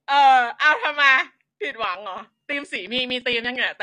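From start to finish the speech sounds dull and smeared, with a warbling, fizzy edge on sustained sounds and sibilants, and nothing above about 9.5 kHz. This is most likely AAC compression at a low bitrate, consistent with AAC-LC at around 32 kbps. Starved of bits, the encoder drops the top of the spectrum and quantises the remaining bands coarsely, so detail turns to swirling, metallic noise.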